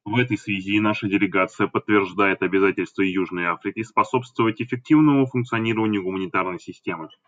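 No technical faults are audible.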